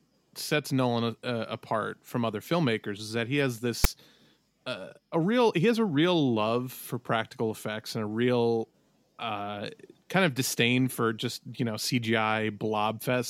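File tags played as audio at 3.84 s, just after "is that he has": a short block of tag data was decoded as if it were sound. The text portion, read as samples, becomes a rasping waveform pushed off to one side of zero, while the zero padding that follows comes out as silence. Because the block is so brief, the result is a hard-edged snap that breaks abruptly into the speech.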